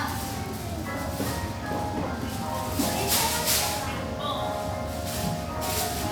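No audible technical faults here.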